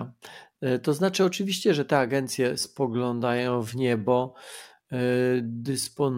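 A speech recording carries a time-stretched section from 2.46 s, right after "znaczy oczywiście że te", to the end: pace drops to about 0.7× with pitch unchanged, so the speech drags, likely from software repeating short pieces. A spectrogram shows harmonics at unchanged heights but drawn out.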